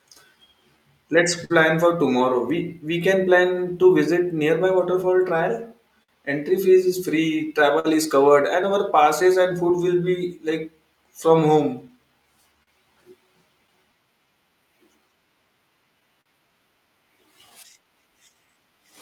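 Right from the start the whole recording carries clock drift between sender and receiver: the far end's clock runs slow, by something like 4 percent, so the receiving buffer keeps running short and the playback side has to keep compensating rather than settling into a steady rhythm.

You hear that compensation as repeated timing corrections from 0.02 to 18.55 s. The receiver keeps repeating tiny slices to pad things out, playing at about 98% speed and adding somewhere around 400 ms overall, so the speech has a faintly dragging, uneven pace with soft hiccups.

On top of that there are scattered short gaps, patched by extending the last bit of sound. Between 0.24 and 9.85 s there are around ten, the longest about 50 ms. From 11.88 to 13.95 s there are roughly four, and from 16.00 to 18.32 s about five, each up to about 40 ms. They come across as quick ticks or little smears.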